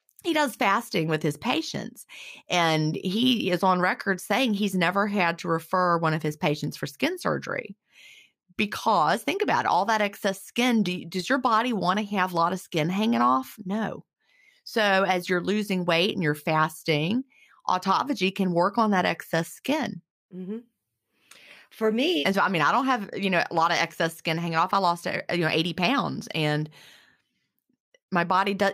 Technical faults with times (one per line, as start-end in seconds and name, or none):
none